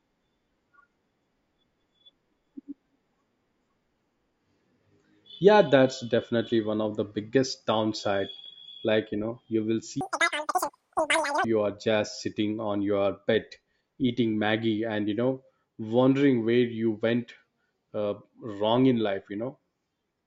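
Wrong sample rate from 10.01 to 11.44 s: the speech runs 2.76 times too fast and about 17.6 semitones high, which fits 16 kHz audio played back at 44.1 kHz.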